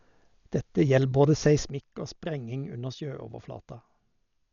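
From the start, the speech is dull and band-limited, with nothing above 6.9 kHz and rough, fluttering noise around tones. This heavy damage likely comes from Dolby Digital compression at a low bitrate, around 48 kbps. At 1.70 s, just after "gjeld både", a sudden gain jump drops the level by about 9 dB, speech and background together, and it stays down to the end.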